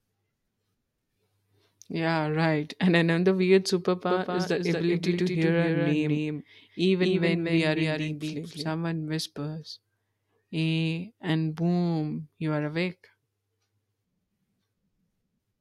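A doubled audio track runs from 4.10 s to 8.72 s, starting just after "another weird": a second, slightly quieter full-band copy of the speech trails about a fifth of a second behind, likely from a slower second capture path. It switches on and off abruptly, with no reverberant tail.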